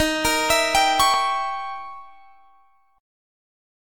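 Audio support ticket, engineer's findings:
Tiny skip at 1.14 s, roughly 12 ms gone. Overlap between stream segments: overlapping timestamps, so the player trimmed real audio at a segment join and the waveform jumps.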